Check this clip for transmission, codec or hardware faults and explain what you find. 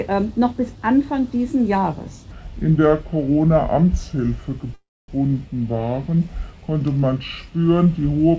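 Two faults turn up here, one stretching over most of the clip and a short dropout sitting inside it, all carried over a G.722 call path at 64 kbps that leaves nothing above 8 kHz.

From 2.31 s right to the end, the audio runs at the wrong speed, about 0.73 times normal. Speed and pitch drop together, so everything sounds slowed and deepened by roughly five semitones. The likely cause is that section being played back against the wrong clock, the kind of mismatch an editor or player introduces when it assumes a different rate than the recording used.

Between 4.74 s and 5.09 s there's a call audio freeze lasting 342 ms. The last bit of sound is carried on as a fading tail, then about 260 ms of silence before the audio resumes exactly where it left off. Nothing is actually lost; a gap has just been pushed into the timeline. That points to packets likely being held up in transit until the jitter buffer ran dry and the receiver had to fill the wait itself.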